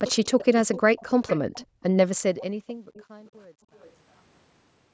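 From 0.0 to 1.83 s an echo leak adds a faint copy of the speech about 341 ms late, roughly 15 dB down, likely from a loudspeaker echo canceller letting sound through; the spectrogram shows ghost harmonics trailing the speech. At 1.67–1.81 s the background is gated by the echo canceller: the noise floor drops about 40 dB for roughly 150 ms, a visible gap in the waveform. From 2.06 s to the end, truncation distortion on the fade, consistent with 10-bit steps without dither, makes the tail gritty, worst from 2.82 s onward, where the waveform becomes square staircases. Echo returns at 2.39–3.3 s (351 ms, about 25 dB down) and at 3.76–3.93 s (356 ms, about 30 dB down). Between 2.53 and 3.71 s, gating again punches holes in the room noise, totalling roughly 700 ms.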